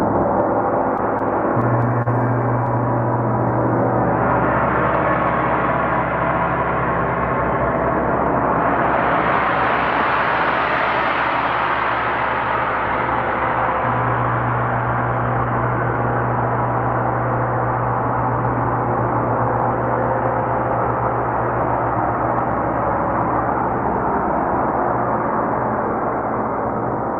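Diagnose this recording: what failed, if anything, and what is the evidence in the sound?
The network stage failed, with repeated stalls (stutter) between 0.97 and 2.08 s. The sound catches and drags six times in that stretch. Each catch is short, the longest about 34 ms, and together they fill 84 ms, about 8% of the span. Nothing is lost. Packets reached the receiver late or more slowly than playback consumed them. The jitter buffer kept running dry, and the receiver extended the last sound until fresh audio arrived.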